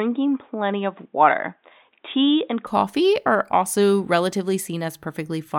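From 0 to 2.67 s the input had likely switched to a poorer device passing nothing above 3.8 kHz. The speech sounds dull and boxy, over faint new background noise far below it. At 2.67 s it clears, with no gap or level jump.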